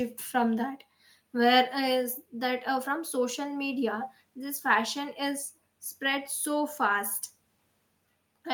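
No audible faults in this speech.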